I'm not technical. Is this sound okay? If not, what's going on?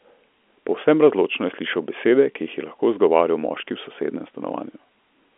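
Yes, nothing stood out as wrong when listening to this speech, which has the narrower sound of an ordinary phone line.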